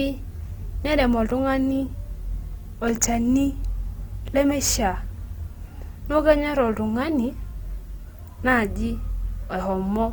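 From start to end the speech sounds grainy and rough, with noise filling detail rather than leaving hollow gaps, likely Opus compression at a rate near 24 kbps.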